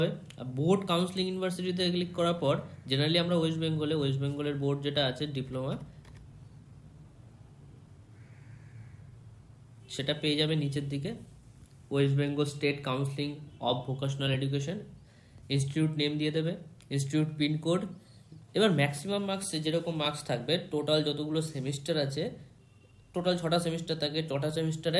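No technical faults can be heard anywhere in the recording. Nothing breaks the audio at any point, with no interruptions, level jumps or added disturbances.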